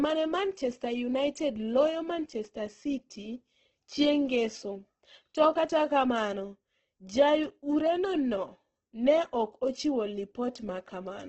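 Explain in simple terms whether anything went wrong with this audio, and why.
From start to finish the speech sounds grainy and rough, with a noisy hiss on the voice and nothing above about 8.2 kHz, so it lacks sparkle. This is likely heavy Opus compression: squeezed too hard, the encoder fills in lost detail with noise.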